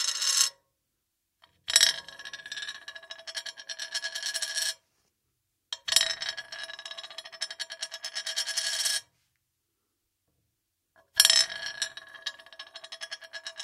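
No technical faults can be heard anywhere in these sounds.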